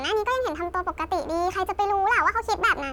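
Throughout, a wrong sample rate: playback runs 1.5 times too fast, which fits 32 kHz audio played at 48 kHz, so the speech sounds hurried and about 7 semitones high.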